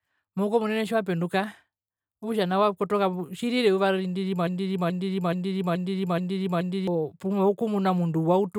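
From 4.47 s to 6.88 s the speech catches on a fragment about 0.43 s long and repeats it exactly, back to back, six times, a stuttering broken-record loop with no variation between passes. Whatever should have been heard across those 2.4 seconds never arrives; the audio simply resumes after the last repeat. The likely cause is a stall in the player, encoder or stream, which kept resending the last chunk it held until fresh data came through.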